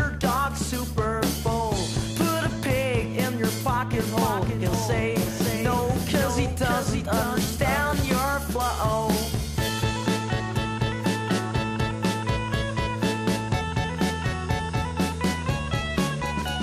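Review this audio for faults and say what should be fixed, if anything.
From 3.92 to 8.16 s there is a doubled audio track. A second full-band copy of the sound trails the original by about half a second, around 5 dB quieter, with no decay or room colour. It switches on and off abruptly at those points. The likely cause is either the same signal being captured a second time through a slower path or an edit leaving two out-of-step copies in the mix. On a waveform, every onset in that span reappears about half a second later at lower amplitude. A spectrogram shows each pattern repeated, shifted right by the same amount with identical shape. To prevent it, route the source through only one capture path and check edits for overlapping duplicate regions before export.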